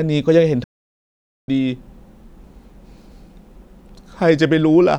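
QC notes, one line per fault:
0.64–1.48 s, playback stall: the speech cuts off mid-flow and the output sits in dead silence for about 840 ms before sound returns. The likely cause is the player running out of buffered data or its thread being blocked, so nothing reached the output until it recovered. On the waveform this is a flat near-silent stretch with abrupt edges. The spectrogram shows an empty vertical band across all frequencies, with no fade or decay tail.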